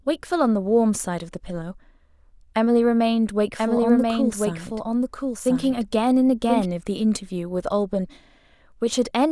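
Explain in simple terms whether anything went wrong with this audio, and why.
Yes, there's a doubled audio track from 3.6 to 6.7 s: a quieter copy of the speech trails about a second behind, likely from a second, slower recording path.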